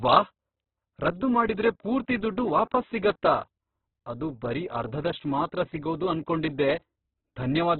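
Throughout the speech the audio carries heavy codec damage consistent with Opus compression at a very low rate, likely around 8 kbps. The band is cut to narrowband, with nothing above 4.5 kHz, so the speech sounds boxed and dull. In its music-oriented CELT mode the encoder keeps each band's energy but, short of bits, fills the detail with folded or noise content, which gives a rough, grainy texture rather than clean harmonics.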